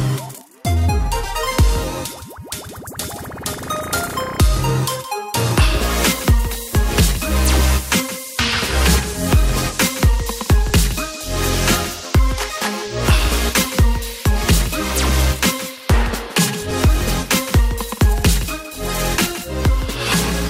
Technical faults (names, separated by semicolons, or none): overlapping chunks